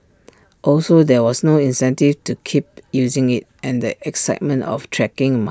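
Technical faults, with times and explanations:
No technical faults detected.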